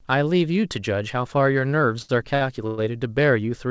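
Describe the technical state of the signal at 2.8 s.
At 2.8 s the speech is just coming out of a call audio freeze, which runs from 2.67 to 2.80 s. For about 0.11 s the last sound carries on as a fading buzz or hiss rather than dropping out. Packets were most likely held up and the jitter buffer ran dry. Nothing is lost. The speech resumes where it stopped, now about 109 ms later. The fill is band-limited to 8 kHz, like the G.722 call audio around it.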